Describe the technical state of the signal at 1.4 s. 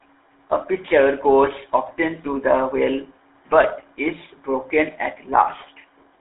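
At 1.4 s the speech carries GSM full-rate codec damage, present across the whole clip. The codec rebuilds the voice from a vocal-tract model driven by a sparse, regular pulse excitation, which fits the 13 kbps full-rate scheme. The result is a plainly audible buzzy, gravelly roughness. The sound is confined to a telephone band of roughly 300 Hz to 3.6 kHz. Nothing is present above 3.8 kHz.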